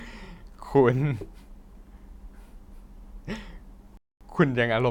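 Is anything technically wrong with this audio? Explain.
Yes, there's one Bluetooth stall from 3.97 to 4.21 s. The speech cuts to dead silence for about 235 ms, then resumes. Most likely, interference delayed packets, the headphones' buffer emptied, and playback waited for the resent data to arrive.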